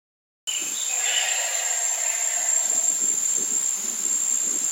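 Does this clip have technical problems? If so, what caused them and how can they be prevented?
Yes. The clip has a cut-off start. There is digital silence until 0.47 s. The sound then begins abruptly, already in progress, with no natural attack. Capture started late and missed the opening. Start recording a moment earlier, with pre-roll, before the sound begins.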